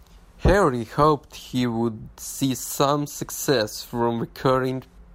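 No technical faults can be heard anywhere in the recording, and the signal holds steady from its first moment to its last.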